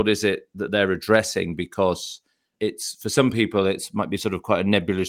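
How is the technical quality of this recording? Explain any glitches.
The technical quality of this recording is sound, with no glitches to explain.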